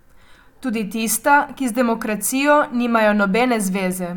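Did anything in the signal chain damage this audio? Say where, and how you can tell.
No, nothing along the way seems to have harmed this speech recording, and there's no stage you could point to as having left a mark on it.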